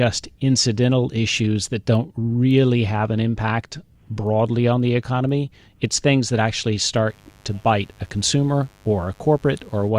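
Speech clip with mains buzz from 7.06 to 9.92 s: a faint 50 Hz raspy hum well below the voice, appearing on a spectrogram as evenly spaced horizontal harmonic lines reaching several kHz.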